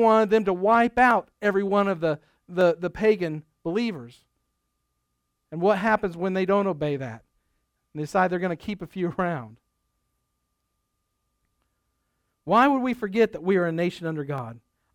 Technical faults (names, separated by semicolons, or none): dropped samples